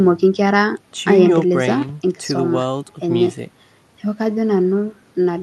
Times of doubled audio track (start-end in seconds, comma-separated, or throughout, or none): none